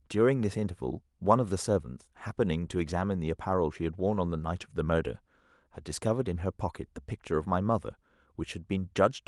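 No technical faults can be heard in this speech.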